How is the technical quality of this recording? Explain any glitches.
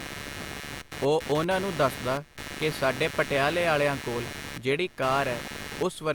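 Two faults affect the whole recording, so the technical quality is compromised throughout.

Computer activity noise runs for the entire clip: processor or peripheral load modulates the shared audio ground, producing a buzzing chirp pulsing around 150 Hz, roughly 10 dB below the speech.

Low-bitrate audio saved at a high bitrate, also throughout: the speech carries the coding artefacts of the earlier encoding. It was likely first encoded at a low bitrate, then re-saved as high-bitrate MP3, which cannot restore what was lost.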